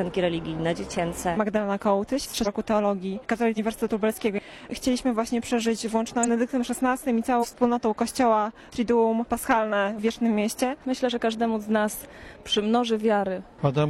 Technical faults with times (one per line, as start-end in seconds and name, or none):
2.42-2.48 compressed frames skipped
3.53-3.59 compressed frames skipped
6.23-6.28 compressed frames skipped
7.39-7.46 compressed frames skipped